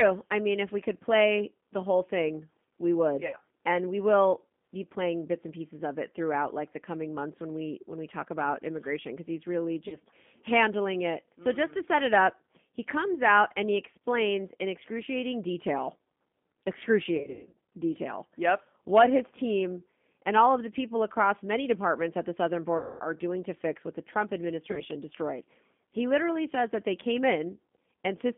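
Speech heard through the G.729 codec at 8 kbit/s, confined to a 200 Hz to 3.5 kHz line band. A spectrogram shows nothing above 3.5 kHz, and the voice sounds rough and slightly synthetic because each 10 ms frame is rebuilt from a vocal-tract filter, a pitch predictor and a few pulses. There is also VoIP packet loss concealed by the speech codec. When audio goes missing, the decoder repeats its last pitch and filter at falling gain, so the speech smears into a buzzy tone or coloured noise that fades, and stays weak for a moment afterwards. On a waveform these gaps appear as sagging, fading sound in place of ordinary speech. This happens at 3.27 to 3.37 s after "whole thing we would" (about 60 ms missing), at 9.88 to 9.98 s between "immigration because he's really" and "handling it" (40 ms), and at 17.17 to 17.57 s, where 280 ms is lost in scattered pieces with the longest run 120 ms. It also happens at 22.78 to 23.02 s between "departments at the southern" and "are doing to fix" (220 ms), and at 24.71 to 24.82 s (60 ms).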